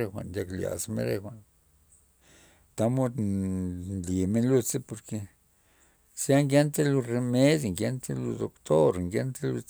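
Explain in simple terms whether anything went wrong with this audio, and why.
Nothing went wrong with this recording; no technical faults turn up anywhere in it. The speech comes through as it was captured, with nothing added, cut short or disturbed along the way.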